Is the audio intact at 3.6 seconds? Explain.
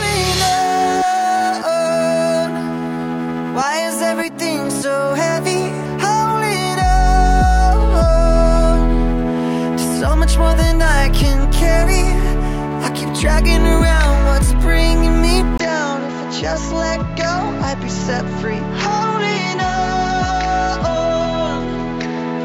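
Yes, at 3.6 seconds the audio is intact, with no dropout, click, distortion or other fault audible at that point.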